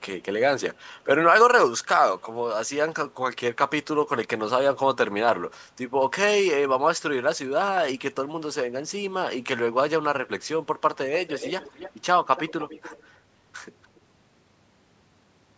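Speech with an echo leak: a delayed copy of the talker returns about 0.29 to 0.31 s after the original, most likely because a far-end loudspeaker's echo canceller let it through. It is barely audible at 0.88 to 1.0 s, 2.18 to 2.22 s and 13.83 to 14.0 s, but clearly audible at 11.15 to 11.93 s and 12.36 to 13.03 s. Unlike room reverberation, it is a distinct repeat at a fixed lag rather than a smooth decay, heard within the call's 8 kHz bandwidth.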